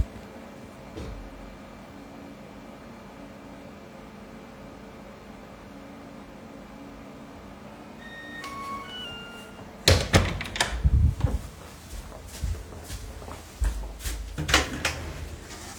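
At 0.91 s and 7.23 s the sound jumps ahead by about 10 ms, with no silence between the two sides. This is likely a dropped buffer (overrun), where samples were overwritten before being collected. On a waveform each shows as an abrupt discontinuity, and on a spectrogram as a thin vertical broadband line.

From 7.68 s to 9.05 s the audio plays 5.41% fast and 91.2 cents sharp, then snaps back. This is likely a drift correction step, a one-step rate change by software matching two clocks. On a spectrogram every band shifts upward together for that stretch and then drops back.

At 10.17 s a longer skip of around 40 ms occurs. At 11.47 s another skip of about 10 ms follows. Both are likely further dropped buffers (overrun), with the same vertical streak.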